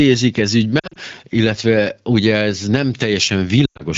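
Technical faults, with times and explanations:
0.79–0.97 s, lost AMR speech frames: brief warbles and dips across 160 ms, about 100 ms missing in runs no longer than 40 ms, just before "illetve ugye ez nem". Frames failing their radio checksum made the decoder repeat the last good pitch and vocal-tract settings at falling gain.
3.66–3.83 s, lost AMR speech frames: the sound drops to near silence within two frames, with 120 ms missing over 140 ms, including one 100 ms run. The AMR-WB decoder repeated the last good frame with quickly falling gain, so this longer gap mutes faster than narrowband would.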